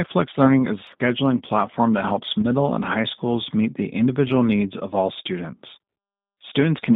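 Throughout, the G.729 codec gives the speech a rough, slightly synthetic texture, consistent with 8 kbit/s coding; the spectrogram shows energy confined to roughly 150 Hz to 3.7 kHz. From 2.41 to 2.46 s, after "platform that helps" and before "and high schools meet", VoIP packet loss concealed by the speech codec fills a 20 ms gap, which points to a single lost packet, with a brief extrapolated buzzy tone or coloured noise. On the spectrogram, smeared harmonics briefly fade, and the waveform dips in level.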